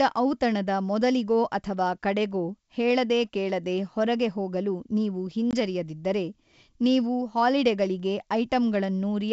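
At 5.51 to 5.53 s there's packet loss on an ADPCM call: about 20 ms, likely a couple of packets, drops to hard-edged silence. The decoder's predictor and step size lose track of the sender's, so the speech comes back slightly distorted before settling.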